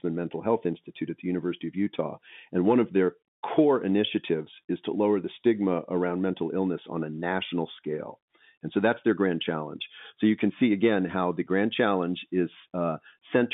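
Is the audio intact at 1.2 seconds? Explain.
Yes, at 1.2 seconds the speech is intact, carried through the telephone-band path without any fault at that moment.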